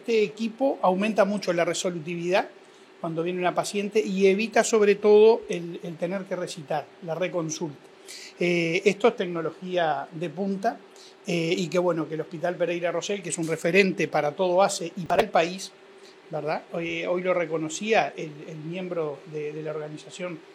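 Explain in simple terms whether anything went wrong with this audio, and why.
At 4.54 seconds there is a single tiny click or buzz. This is a repeated buffer: new audio arrived late, so a slice of about 1.5 ms was played twice more. Because it is one quick stutter, it sounds like a lone click rather than gritty noise.

From 15.06 to 15.23 seconds there is a short burst of crackle. This is processor overload crackle: the processor fell behind over and over, and each late chunk of roughly 10 ms was skipped, leaving a rapid run of tiny gaps. Unlike the single click, it is a 0.17-second stretch of tearing that stops once the load eases.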